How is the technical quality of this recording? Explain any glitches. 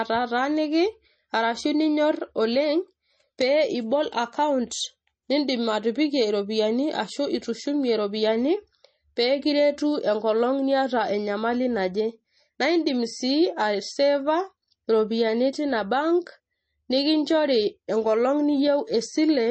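The quality is noticeably degraded. Throughout, the speech sounds watery and swirly, s sounds turn metallic, and there is no treble above about 8.4 kHz. This is likely MP3 compression at a low bitrate, which fits roughly 32 kbps: the encoder cuts the top band and zeroes weak frequency lines, which flicker between frames.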